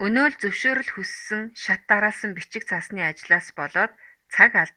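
No technical faults turn up in this speech, which keeps its full audio band through Opus voice compression, with only the light coding texture that points to a hybrid SILK-plus-CELT setting at around 24 kbps.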